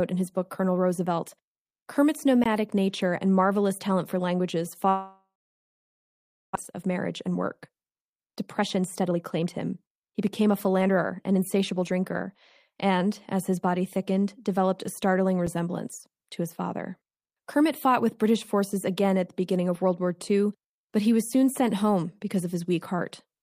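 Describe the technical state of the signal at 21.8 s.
At 21.8 s the speech signal is intact, with no audible fault at that moment.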